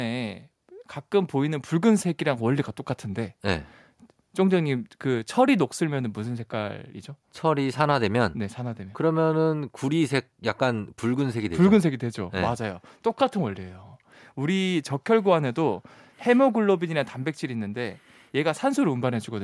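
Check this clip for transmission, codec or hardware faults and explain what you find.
Nothing in the speech signal points to a transmission, codec or hardware problem, and its level, continuity and timing stay steady throughout.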